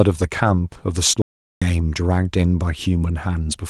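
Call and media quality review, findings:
Lost packet rebuilt from error correction, 0.43–0.49 s: about 40 ms of rougher, noisier speech with no gap. Sounds like a couple of separate packets went missing, and the decoder played the low-bitrate copies carried in the following packets (Opus in-band FEC) instead of leaving a hole.

Audio dropout to silence, 1.22–1.62 s: roughly 0.4 s of dead silence, no room tone at all, speech cutting out and resuming mid-flow. The audio in that stretch is simply gone. Most likely the input dropped out (a device disconnect, a link failure or a stray mute) while the encoder kept writing silence. Around it the Opus path is band-limited to about 12 kHz.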